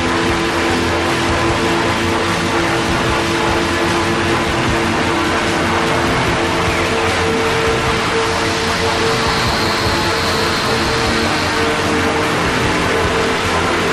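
No technical faults can be heard anywhere in this audio.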